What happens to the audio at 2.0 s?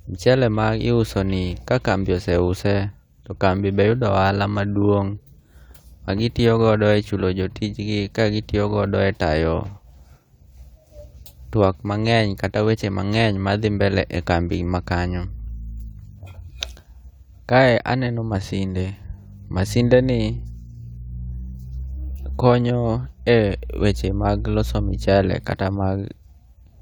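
Nothing goes wrong at 2.0 s; the speech carries on intact through that moment, with no dropout, click, distortion or other fault to be heard.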